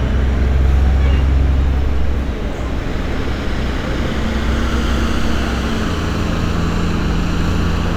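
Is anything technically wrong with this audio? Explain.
No technical faults are audible.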